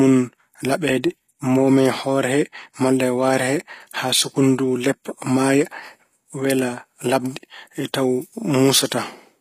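Throughout the speech, s sounds come out gritty and lispy, and the treble sounds synthetic, with nothing above about 15.5 kHz. The likely cause is HE-AAC compression at a low bitrate, around 24 kbps, rebuilding the upper band from copied lower harmonics.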